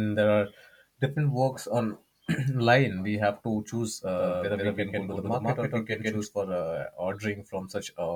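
From 4.17 s to 6.25 s the speech is doubled: a second full-band copy runs roughly 150 ms behind, at about the same loudness, with no decay or room colour, so each syllable is followed by a crisp slapback. It switches on and off abruptly. The likely cause is a second, slower capture path or an edit holding two copies out of step. On a spectrogram every harmonic stack repeats a fixed distance later, and the waveform shows matching onset pairs.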